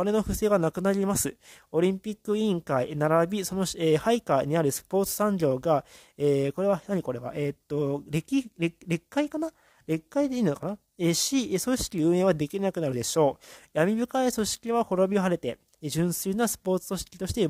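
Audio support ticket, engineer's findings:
Bit error spike: two single sharp ticks at 9.49 s and 10.63 s, about -35 dBFS, two samples each. Likely flipped bit in memory or on a digital link; value jumps and returns.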